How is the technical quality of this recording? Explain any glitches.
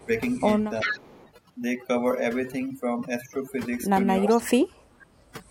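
The recording has clear technical problems: heavy noise processing throughout, plus several dips and echoes typical of a speakerphone call.

Overdone noise removal runs through the whole clip. A noise reducer set too aggressively switches off individual frequency bands it mistakes for noise, taking soft parts of the speech with them. The background drops and breaks up into twinkling specks.

Speech suppressed in double talk occurs at 0.0 to 0.1 s, 0.83 to 1.09 s and 4.21 to 5.08 s. The voice ducks, by a modest amount at first and then much more deeply, nearly vanishing in the last stretch. The likely cause is an echo canceller turning down the voice because it could not tell the talker apart from the far side talking at the same time.

Echo leak appears at 0.3 to 0.47 s, 0.8 to 1.31 s and 4.28 to 4.36 s. A copy of the voice returns 380 ms late. It is very faint at first, nearly as loud as the speech around 1 s, and moderate near 4.3 s. 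The likely cause is a loudspeaker's sound getting past an incomplete echo canceller and being sent back.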